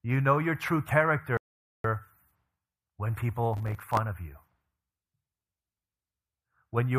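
At 1.37 s, just after "know your true", the speech drops out into silence until 1.84 s, a gap of about 0.47 s. This is a playback stall, likely the player running short of data or its thread being blocked, so output halted until it recovered.

From 3.54 to 3.97 s, just before "of you", a processor overload crackle runs through the speech as a gritty tearing. Deadlines for very short buffers, which fits a buffer of a few milliseconds, were missed around thirty times in succession. Each miss replayed a fragment of old audio with hard edges.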